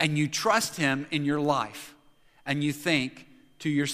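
No technical faults can be heard anywhere in the recording. There is nothing to place on a timeline, and no moment calls for explanation.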